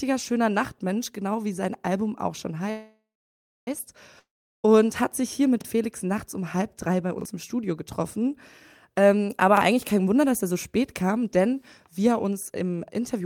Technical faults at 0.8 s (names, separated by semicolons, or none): none